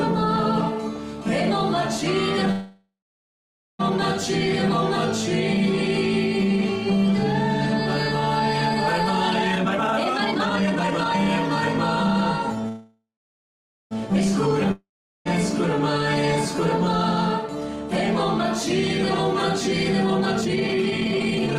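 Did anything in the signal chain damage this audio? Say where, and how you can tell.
Yes. Call audio freeze at 2.51–3.81 s and 12.68–13.93 s: a fading buzz, then silence, then the sound resumes intact. Packets were likely held up, emptying the jitter buffer.

Jitter buffer speed-up at 9.55–12.68 s (137%) and 19.93–21.58 s (162%): the sound hurries at unchanged pitch, as the buffer trims pitch periods, roughly a second each time.

Long network dropout at 14.71–15.27 s: a fading buzz, about 0.4 s of silence, then sound returns with about 540 ms missing, likely from packets never arriving.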